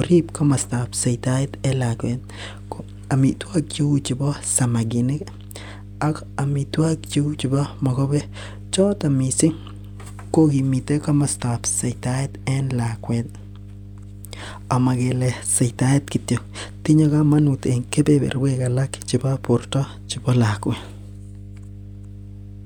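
Mains hum runs under the speech from start to finish. A steady low tone sits at 50 Hz, with some of its low harmonics, at roughly 15 dB below the speech level. The 50 Hz fundamental points to power-line interference, most plausibly a ground loop between connected equipment or a transformer close to the signal path.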